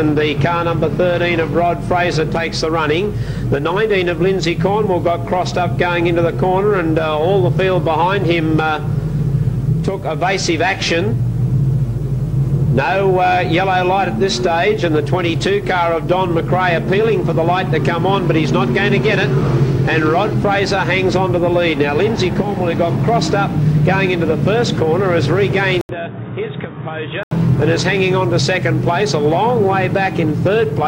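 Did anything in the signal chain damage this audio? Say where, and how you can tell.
Yes. At 25.81 s the sound drops out for about 80 ms, then returns dull and boxy, with nothing above 3.8 kHz, roughly 10 dB quieter, and with a new background noise floor sitting some 45 dB under the signal. Full bandwidth comes back at 27.31 s. This is most likely an input switched to a poorer device at the driver stage: the system changed capture sources mid-recording, and the substitute microphone or headset profile brought its narrower band, tone, level and noise with it.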